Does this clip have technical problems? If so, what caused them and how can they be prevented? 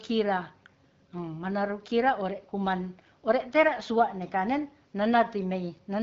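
No, no technical faults here.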